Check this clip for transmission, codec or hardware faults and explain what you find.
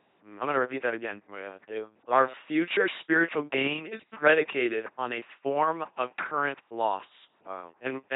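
One fault runs through the entire speech clip: the LPC-10 vocoder. Each moment is resynthesised from a ten-pole filter driven by either buzz or hiss, so the result is a mechanical robot voice with nothing above 3.9 kHz. Unlike simple band-limiting, the natural voice texture is replaced, which fits 2.4 kbit/s.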